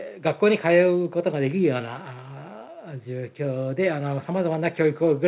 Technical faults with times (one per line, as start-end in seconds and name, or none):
none